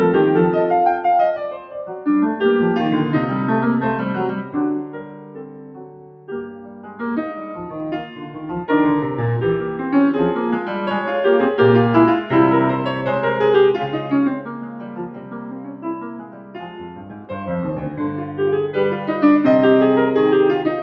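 Noise suppressor applied to music, throughout the clip: a suppressor built for speech treats sustained tones and ambience as noise, so held parts and decays are pulled down while attacks get through. The level swings by around 10 dB, giving a pumping, thinned-out sound over audio already limited to 8 kHz by the call path.

Sound cut by the noise suppressor, at 1.52–2.06 s (about 8 dB deep), 4.8–7.02 s and 14.35–17.31 s (about 9 dB each): here the suppressor judged sustained passages to be noise and clamped them hardest, so they sink in level or their tails are cut short.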